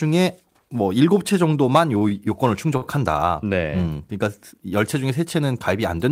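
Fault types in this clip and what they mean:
Short stall from a late packet: when a packet arrived behind schedule the jitter buffer emptied, so the receiver held the last bit of speech until the data caught up, then resumed from the same point. Here this happens three times, at 1.98 to 2.03 s, 2.09 to 2.13 s and 2.77 to 2.84 s, stretching the sound by 29, 20 and 47 ms with a faint buzz or dip. Unlike a dropout from a lost packet, nothing is skipped.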